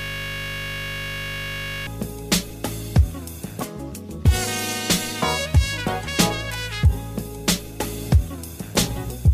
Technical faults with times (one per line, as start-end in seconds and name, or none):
0.00-1.87 system hang loop